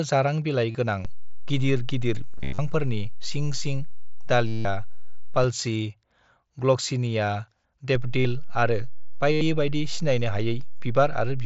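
Concealed Bluetooth headset packet loss at 0.71, 2.38 to 2.59, 3.44, 4.48 to 4.65, 8.20 and 9.32 to 9.41 s: lost headset packets were filled by repeating recent waveform. The longer runs, about 200 ms scattered across 2.38 to 2.59 s and 170 ms at 4.48 s, turn into a held buzzy tone that warbles as the speech resumes.

A DC step at 1.05 s holds until 5.44 s, and another begins at 7.95 s and lasts to the end. Each time the waveform's zero line shifts suddenly, producing a low thump while the speech carries on unchanged.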